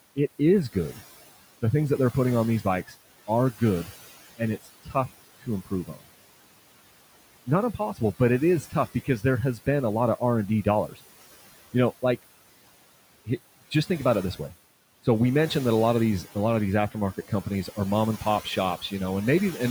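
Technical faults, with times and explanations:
Throughout: noise suppressor artifacts. The background is pulled down about 17 dB between phrases and returns under speech.
0.16–1.01 s: speech cut by the noise suppressor. Brief soft sounds, roughly a tenth of a second in all, dip about 13 dB and sound swallowed.
2.88–6.04 s, after "they're putting on these": speech cut by the noise suppressor. About half a second of quiet speech is gated as noise, dropping up to about 17 dB.
7.46–10.99 s: speech cut by the noise suppressor. Word endings and soft consonants, roughly 0.4 s altogether, sink up to about 14 dB and turn faint.
16.92–18.92 s, after "a lot of these": speech cut by the noise suppressor. Around 0.2 s of low-level speech falls up to about 11 dB with the background.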